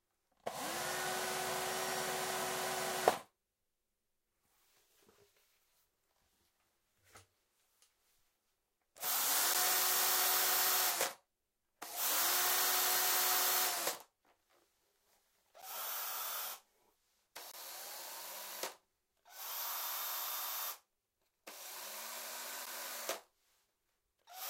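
A recording of everyday sounds in which the program likely failed repeatedly to fill its output buffer in time, leaving a block of digital silence at 9.54, 15.62 and 22.66 s (about 11 ms each, which fits a 512-sample buffer) and from 17.52 to 17.54 s, twice as long. Each abrupt dropout is heard as a tick or brief hole.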